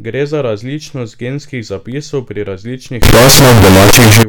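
Float read as integer from 3.02 to 4.23 s in this speech recording: the sound turns very loud, harsh and nearly square at an almost fixed, high level, with background noise as loud as speech, likely because 32-bit float samples were read as 32-bit integers, so sign and exponent bits dictate amplitude.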